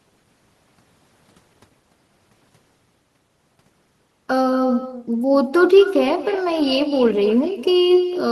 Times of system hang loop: none

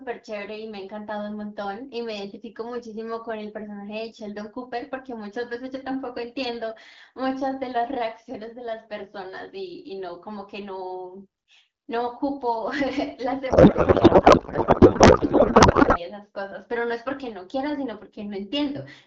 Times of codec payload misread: 13.49-16.00

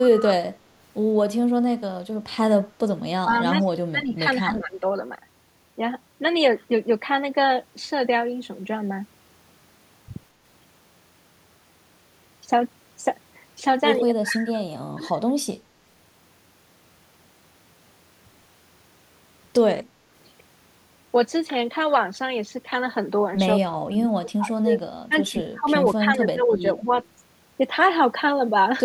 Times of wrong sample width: none

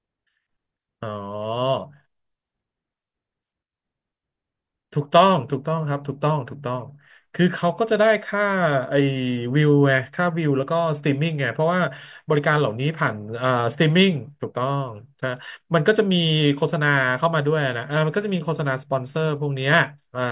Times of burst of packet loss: none

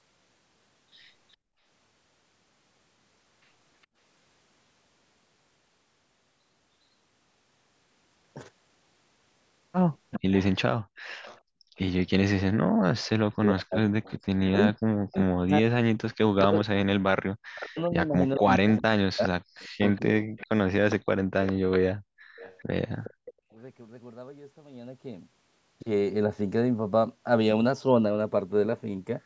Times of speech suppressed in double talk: 10.18-23.26

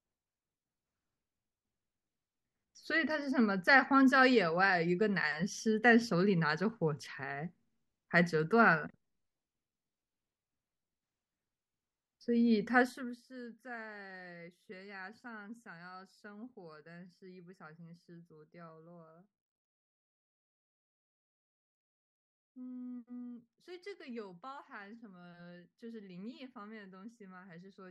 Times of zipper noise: 12.82-13.24

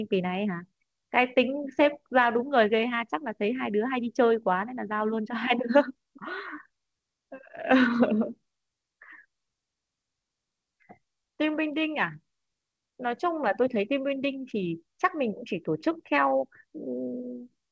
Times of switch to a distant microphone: none

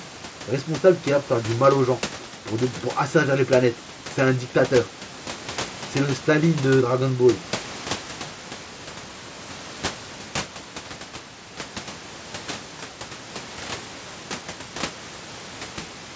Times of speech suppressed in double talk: none

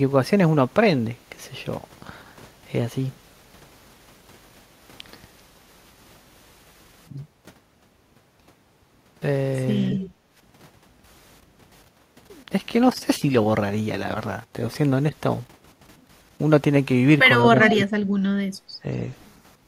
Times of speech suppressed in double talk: 9.93-10.01, 17.54-18.42, 18.82-18.88

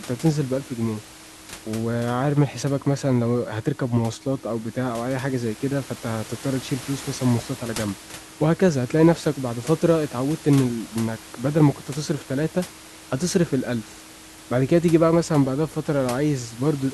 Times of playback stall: none

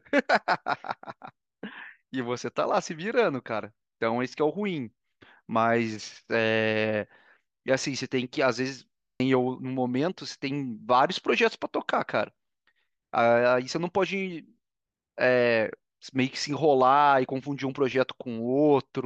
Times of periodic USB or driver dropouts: none

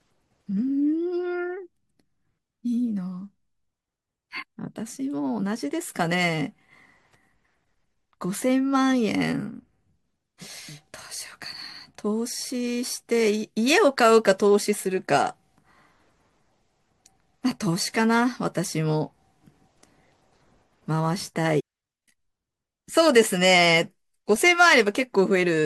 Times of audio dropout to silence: none

